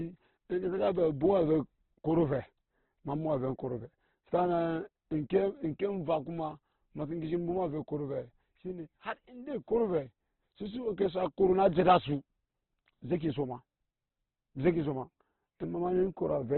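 The whole clip has a hard ceiling: there's nothing above 4.2 kHz, and the speech sounds rough, grainy and noisy throughout. That points to heavy Opus compression, likely in its music mode at a starved bitrate around 12 kbps, filling bands with noise.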